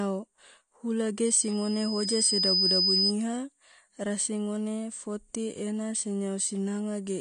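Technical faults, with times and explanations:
Throughout: AAC compression. The speech sounds dull and smeared, with a warbling, fizzy edge on sibilants and nothing above 9.6 kHz. This is likely lossy AAC-LC coding at a low bitrate, around 32 kbps, which lowers the cut-off and quantises the spectrum coarsely.
1.25 to 3.14 s: loudspeaker feedback squeal. A single 5 kHz tone swells over about a second and a half into a piercing whistle about 5 dB louder than the speech. The microphone picked up its own loudspeaker, and at that frequency the loop gain exceeded one, so the tone kept growing.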